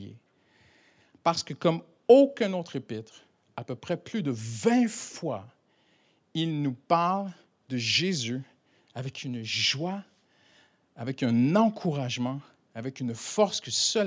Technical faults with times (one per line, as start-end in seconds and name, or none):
none